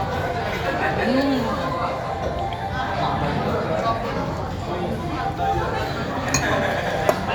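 A recording of everyday sounds with no technical fault to be heard anywhere in it. Nothing in it calls for a time or a cause to be pointed out.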